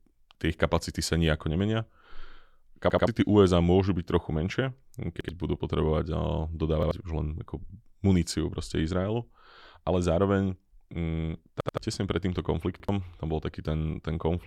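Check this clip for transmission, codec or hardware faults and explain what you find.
One fault appears: a repeated buffer, five times. Late audio made the device replay its last 85 ms block, which fits a 4096-sample buffer. The speech stutters with hard joins at 2.90 and 11.61 s, twice over, and at 5.21, 6.83 and 12.80 s, once.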